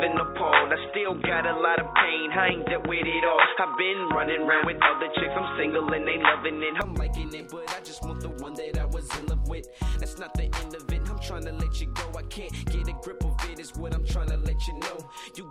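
Likely input switched to a poorer device, 0.0 to 6.82 s: the sound is dull and boxy, with nothing above 3.8 kHz, a level a few decibels off, and a faint noise floor of its own. At 6.82 s it opens out abruptly, with no silence at the switch.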